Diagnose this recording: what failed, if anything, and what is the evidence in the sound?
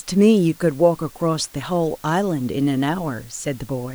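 Sample-format conversion failed: the speech was reduced to low bit depth with dither, 8 bits, leaving a steady, even hiss around 30 dB below the speech throughout, without distortion.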